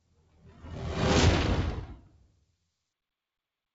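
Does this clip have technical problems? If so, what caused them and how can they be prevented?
Yes. A noise suppressor built for speech was left on while this audio was captured, so the whole clip is processed as though it were a voice call with background noise. The suppressor treats steady and sustained parts of the sound as noise and pulls them down, while sudden onsets mostly pass. As a result the level swings by around 20 dB, making the sound pump and thin out. To prevent it, disable noise suppression whenever the source is not speech.

Further damage is where the sound is cut by the noise suppressor: from 0.00 to 0.64 s the sound sinks by as much as about 12 dB, and from 1.95 to 2.7 s by about 13 dB. In both stretches the steadier or fading parts of the sound are the ones pushed down, so their level drops and their decay ends early while the sharper attacks survive. The fix is the same: turn the suppressor off for non-speech material.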